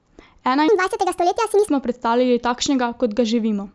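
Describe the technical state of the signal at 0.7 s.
At 0.7 s the speech is inside a wrong sample rate fault that runs from 0.68 to 1.68 s. The samples play back 1.5 times faster than they were captured, with no conversion, which fits 16 kHz material being clocked out at 24 kHz. Tempo and pitch therefore rise together, about 7 semitones higher, giving a chipmunk-like, hurried voice. A pitch shifter would raise pitch while keeping the timing intact. Here the timing tightens in lockstep with the pitch.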